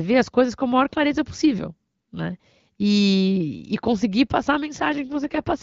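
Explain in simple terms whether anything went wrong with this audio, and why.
Right after "e conseguir passar a", at about 4.9 s, an AMR rate drop hits: the phone network squeezed the HD Voice codec to fewer bits, so the speech turns rough and synthetic until the clip ends at 5.62 s. Unlike a dropout, nothing goes silent, and the sound doesn't go muffled either.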